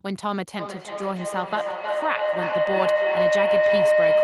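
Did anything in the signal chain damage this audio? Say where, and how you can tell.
Yes. Feedback howl sets in at 0.59 s and runs to the end: a tone near 700 Hz builds up, repeating roughly every 300 ms, and peaks about 7 dB above the speech. That's an acoustic loop at the call stage. Two devices sharing a room keep re-amplifying each other until something mutes.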